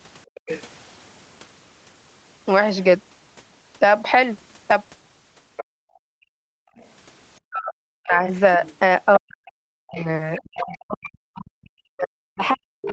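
At 0.3 s the room background drops out abruptly, falling by about 40 dB for about a tenth of a second before it returns at 0.43 s. This is background gated by the echo canceller: while the loudspeaker played, the canceller clamped the microphone down hard, taking the ambient room sound with it, then released once the loudspeaker went quiet. Overlapping this, from 0.35 to 0.63 s, a faint second voice sits around 15 dB below the main talker. That is the other side's voice leaking through, likely because the echo canceller left part of the loudspeaker playback in the microphone signal.

The pattern repeats on a larger scale from 5.57 to 6.87 s. The same low-level voice leaks in around 15 dB down. Within that span, from 5.64 to 6.77 s, the background is gated again, sinking by about 40 dB for about a second as the canceller holds the microphone down against the loudspeaker signal.

From 7.49 s to the end the talker's own speech starts to dip and break up, losing level in pieces by as much as around 40 dB. 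From 8.39 s onward the other voice leaks through underneath at around 15 dB down, and the suppression continues to the end. This is speech suppressed in double talk, likely caused by the echo canceller failing to tell its own talker apart from the loudspeaker echo while both sides spoke, so it turned both down. All of this sits within the call's band, which ends at 8 kHz.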